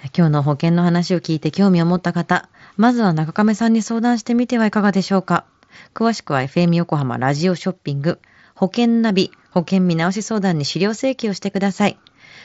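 At 5.07 s and again at 11.53 s there is concealed Bluetooth headset packet loss. Each time a single 7.5 ms voice packet from the headset went missing, and the receiver filled the gap by repeating the best-matching stretch of the preceding waveform. As isolated losses, both are nearly inaudible. On a waveform each patch appears as a briefly repeated cycle. On a spectrogram it is a thin vertical blur across the harmonics, capped near 8 kHz by the mSBC codec.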